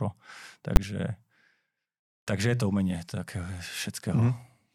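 A speech recording with one fault: invalid numbers at full scale at 0.76 s. For about 10 ms, a processing step produced infinite or undefined values that were clamped to the largest positive or negative value, so the output jumps to one extreme and stays pinned there, far beyond the speech peaks. With a block this short it is heard as a single loud bang. On a waveform it appears as a flat slab far beyond the surrounding peaks; on a spectrogram, as a bright vertical stripe spanning all frequencies.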